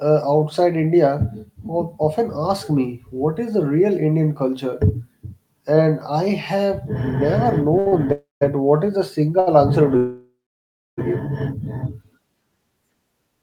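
At 7.79 s and again at 7.88 s the speech catches twice in quick succession, a sound held about 66 ms and then about 41 ms too long, with a faint buzzy sustain before it carries on. These are short stalls from a late packet: each time the jitter buffer ran dry, the receiver stretched the last bit of audio until the packet turned up, then resumed from the same point, so nothing is lost but the timing slips.

From 8.12 s to 8.43 s the sound smears into a fading buzz and then drops to silence for about 170 ms before the speech resumes. This is a call audio freeze, likely caused by packets being held up in transit long enough to empty the jitter buffer. The receiver padded about 291 ms with decaying continuation and then quiet, and the speech picks up where it stopped.

At 9.40 s another short stall from a late packet holds a sound for about 70 ms, heard as a brief drawn-out buzz before the speech moves on.

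The longest break runs from 9.97 s to 11.00 s, a second call audio freeze. The last sound trails off as a decaying hiss and then goes silent for about 640 ms, roughly a second of inserted time in all. The likely cause is a longer hold-up of packets on the network, during which the receiver had nothing to play. The speech then continues from exactly where it left off, with nothing missing.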